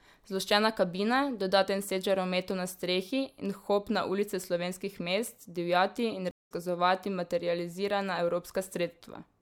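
Speech clip with a stream reconnect just after "slovenskih mest divjati in": from 6.31 to 6.52 s the audio drops to about 0.18 s of silence, a flat waveform and blank vertical band on a spectrogram. It resumes roughly 150 ms later in the stream, skipping that material as a fresh decoder starts.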